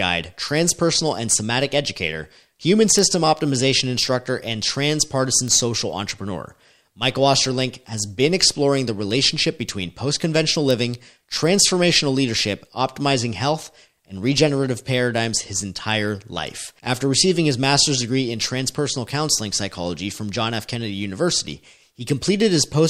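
A speech clip with three single-sample bit error spikes, each a sharp broadband tick from one flipped bit: at 2.99 s after "and somatic educator human" (peaking at about -3 dBFS), at 5.48 s before "social entrepreneur" (about -9 dBFS), and at 10.71 s after "relationship between post conventional" (about -3 dBFS).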